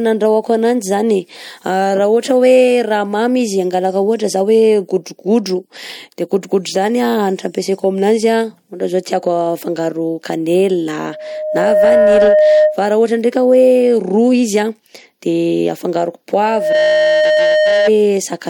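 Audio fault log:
11.00–12.85 s and 16.42–17.91 s: loudspeaker feedback squeal. A 614 Hz tone swells above the speech within a second, because the loop's gain exceeds one there.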